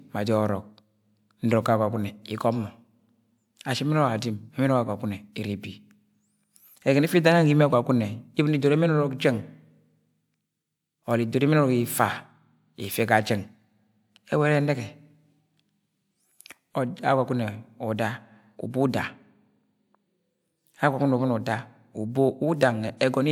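Nothing goes wrong anywhere in this speech recording, so there's nothing to flag along the way.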